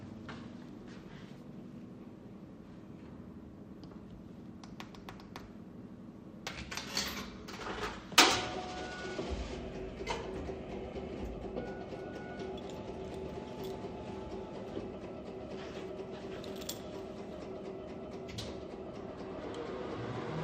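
From 8.12 to 8.14 s, a brief patch of DAB burbling, a few watery blips, interrupts the sounds. Weak reception let a small share of bit errors slip past error correction, corrupting audio data so short blips of noise appear in single sub-bands. A spectrogram shows scattered bright rectangular blocks.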